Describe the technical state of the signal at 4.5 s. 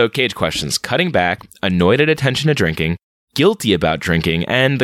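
At 4.5 s the speech signal is intact, with no fault present at that moment.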